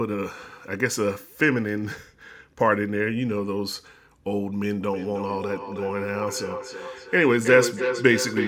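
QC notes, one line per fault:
4.82–8.48 s, feedback echo between two devices: from here to the end, each word comes back about every 300 ms, thinner and ringier, peaking about 7 dB under the speech. A second device in the room is replaying the call into the mic, outside the echo canceller's reach.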